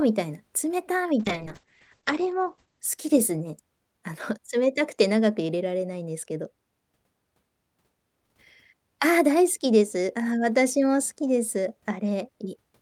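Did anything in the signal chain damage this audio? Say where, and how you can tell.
Yes: a call bitrate drop from 1.2 to 4.13 s. The codec fell from 40 to 9 kbps, coarsening the speech and narrowing its band from 20 kHz to 8 kHz.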